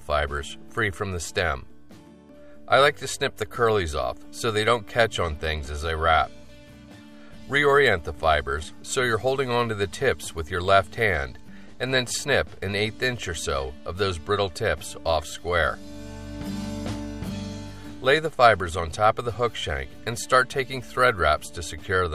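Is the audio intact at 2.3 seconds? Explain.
Yes, the audio is intact at 2.3 seconds, with no dropout, click, distortion or other fault at that moment.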